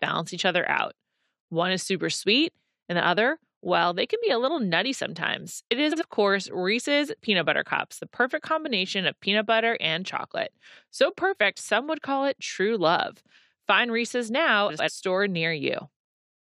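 Frames out of order at 5.91 to 6.03 s and again at 14.69 to 14.89 s: two adjacent runs of coded speech were decoded in swapped order, so each stretch plays its second half before its first. The first swap exchanges blocks of about 46 ms, the second blocks of about 93 ms, which fits runs of two and four frames. Both are heard as a brief garbled flutter, and no time goes missing.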